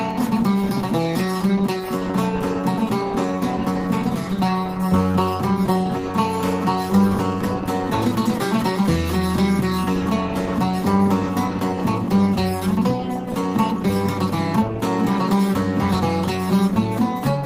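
Nothing in the signal points to any technical problem; the audio holds steady from its opening moment to its last.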